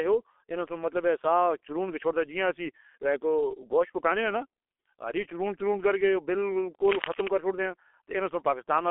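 From the start, the speech carries heavy G.723.1 codec damage. The band is narrow, roughly 300 Hz to 3.4 kHz, and nothing reaches above 3.7 kHz. The top end is gone, so the sound is muffled. The codec rebuilds speech from a coarse model updated once per long frame. That smears consonants and leaves a hoarse, rough texture. The thinness fits a low bitrate near 6 kbit/s.

From 6.85 s to 7.34 s, cable scratch noise breaks in. It is a dense, uneven burst of scratching and rustling, about as loud as the speech itself. The likely cause is a worn cable, connector or control being moved, so its contact resistance jumps rapidly. Each jump adds a crackle to the signal. The scratching rides over the speech for about half a second, then stops.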